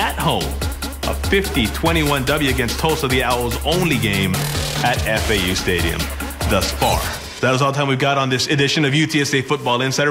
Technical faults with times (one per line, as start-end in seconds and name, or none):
0.00-10.10 timecode bleed